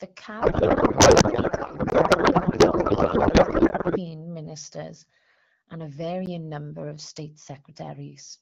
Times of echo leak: none

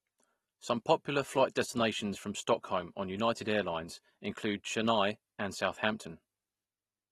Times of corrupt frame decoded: none

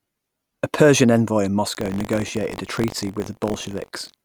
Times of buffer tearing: 1.73-4.25

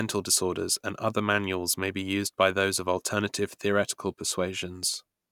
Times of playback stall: none

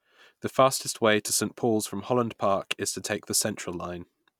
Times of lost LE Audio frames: 1.27-1.29

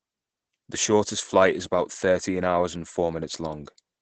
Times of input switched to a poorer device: none

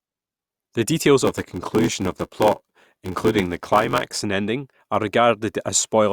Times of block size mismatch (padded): 1.24-4.22

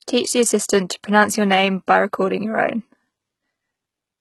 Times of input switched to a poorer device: none

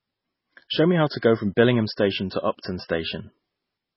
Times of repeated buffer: none

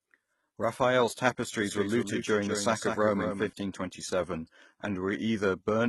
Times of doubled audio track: 1.61-3.49

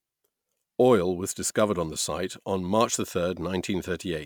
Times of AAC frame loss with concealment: none

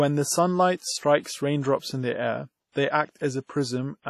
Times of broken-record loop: none

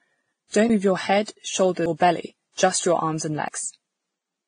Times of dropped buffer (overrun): 0.70, 1.86, 3.48

